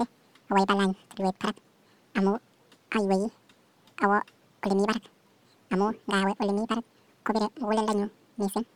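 From the first moment to the last, the speech races along at twice its natural rate and sits a full octave, 12 semitones, above where it belongs. This is audio read two samples at a time, double speed: the playback took each pair of samples as a single frame, as if expecting two channels or wider samples, so everything ran 2x fast and an octave high.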